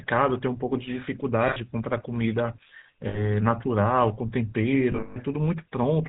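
From start to end the speech carries the buzzy, gravelly roughness of the GSM full-rate codec, which fits the 13 kbps coder. Nothing above 4 kHz survives. The coder rebuilds the voice from sparse, regularly spaced pulses, and that gives a grainy rasp rather than the smeared, watery swirl of modern low-bitrate codecs.

Lost GSM frames then break in three times: at 1.48 to 1.57 s for 80 ms, at 3.08 to 3.21 s for 60 ms, and at 4.92 to 5.17 s, where 200 ms of losses are scattered across 240 ms, the longest run around 150 ms. In each gap the decoder repeats the last good frame. Instead of going silent like a plain dropout, the sound freezes into a metallic ring.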